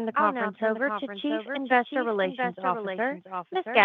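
Throughout, every sound returns as a second, full-band copy roughly 0.7 seconds later and around 5 dB quieter, with no decay or room colour on it. This is a doubled audio track, most likely from the signal being captured twice by paths of different speed.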